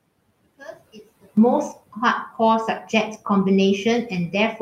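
From 0 to 1.37 s the speech drops by about 20 dB and sounds faint, likely because one channel is inverted and cancels its partner when summed to mono.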